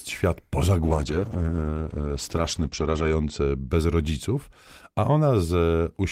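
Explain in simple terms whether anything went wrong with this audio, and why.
From about 0.82 to 3.75 seconds, right after "świat po", the speech turns muffled and rough, as if heard through a cloth, and stays that way for over two seconds before clearing up just before "rodziców a". This is a call bitrate drop. The call's connection estimate fell, so the encoder was told to use far fewer bits. It coded the sound more coarsely and cut off everything above about 8 kHz, taking away the crisp upper part of the speech until the bitrate recovered.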